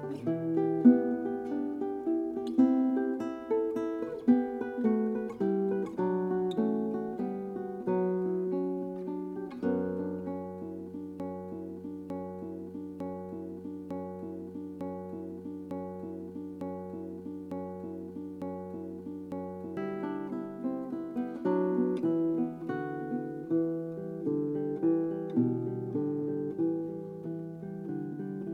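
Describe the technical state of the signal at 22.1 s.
At 22.1 s the signal is intact, with no dropout, distortion, glitch or other technical fault audible at that point.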